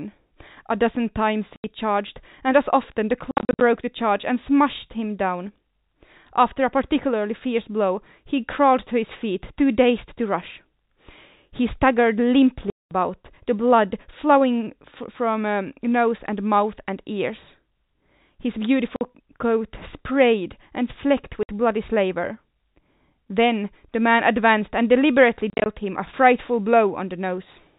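Packet loss filled with silence punches holes in the speech at 1.56 s (80 ms), from 3.31 to 3.61 s (scattered gaps totalling 220 ms), at 12.7 s (210 ms), 18.96 s (50 ms), 21.43 s (60 ms), and from 25.5 to 25.66 s (scattered, 110 ms). Every gap is a multiple of 10 ms, which fits 10 ms packets. The missing stretches fall to dead silence with hard edges, not the smeared or repeated sound that concealment leaves, while the 4 kHz telephone band stays steady around them.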